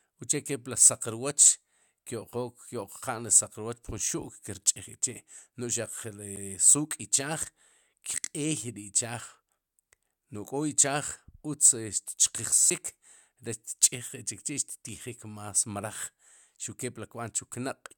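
At 6.36 s and 12.70 s there is a CD skip. The laser jumped tracks. Each time, a tick and a very brief mute come before the speech jumps ahead or back.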